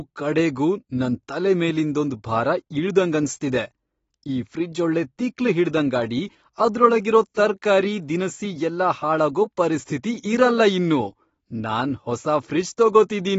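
From start to finish the speech has nothing above 7.6 kHz, sounding dull, with a smeared, warbling texture on sustained sounds and sibilants. That is plainly audible damage from AAC compression, likely AAC-LC at a low rate that fits about 24 kbps, where the encoder drops the top band and coarsely quantises what remains. A simple low-pass filter would dull the top just as much but leave the remaining sound clean, without this swirling artefact.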